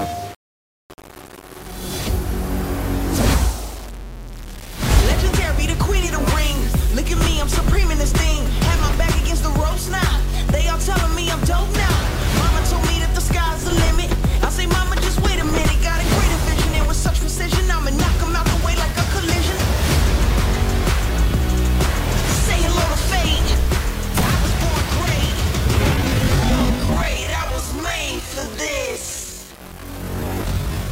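From the start, the whole clip carries grainy distortion that tracks the signal, likely low bit depth without dither: rounding to about 6 bits leaves error only around 20 dB below the sound. Quiet passages turn gritty or sputter. A waveform shows visible stair-steps, and a spectrogram shows broadband hash that rises and falls with level.

At 25.90 s, the pace abruptly slows to about 0.62 times speed, with pitch unchanged, through 30.91 s. This is likely a time-stretched section, lengthened by repeating short pieces, so it drags. A spectrogram shows stretched, blurred onsets with repeated textures.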